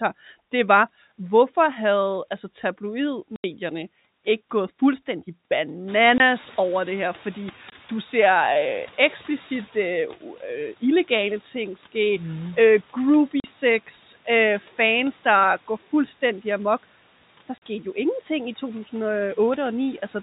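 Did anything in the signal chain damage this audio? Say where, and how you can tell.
Yes. Network first: hard-edged silent gaps at 3.36–3.44 s (80 ms), 6.18–6.20 s, 7.70–7.72 s, 13.40–13.44 s just before "sex øh fans der", and 17.58–17.62 s. That's packet loss filled with silence, and every gap is a multiple of 20 ms, which fits 20 ms packets.

Call processing too: right after "ikke gået fuldstændig" the room noise jumps up around 6 s, and from 5.87 s the noise suppressor is catching up. The noise comes through with less reduction at first and only settles about 8 dB lower by 9.75 s, a 3.88 s adaptation lag.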